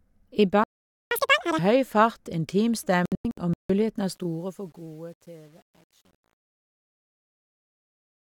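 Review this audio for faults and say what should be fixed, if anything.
At 0.64 s the speech cuts to silence for about 475 ms, until 1.11 s, then picks up where it left off. That's a playback stall, likely the player running dry or its thread getting blocked. Keep a deeper playback buffer and run the audio thread at a higher priority.

From 1.11 s to 1.59 s, just before "høy fart", there's catch-up at higher speed. The player works through its backlog at twice normal speed, so the pitch jumps by around ten semitones. Let the stall recover by resuming at normal rate, or use gentle time-stretching without a pitch shift.

Between 3.06 s and 3.70 s there's a digital broadcast dropout. The receiver mutes in several short holes, losing about 384 ms of audio spread over roughly 640 ms. The longest single gap is 160 ms, and the missing material never comes back. Better reception or stronger error protection with concealment would prevent this.

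The fade-out starts at about 4 s and ramps down to the end at 8.23 s, but it carries truncation distortion from 4.01 s. That fits a gain stage keeping only about 9 bits without dither. As the level sinks, the waveform turns steppy and gritty, and it is at its worst from 4.54 s to 8.23 s. Do the fade at higher resolution and dither before the final word-length reduction.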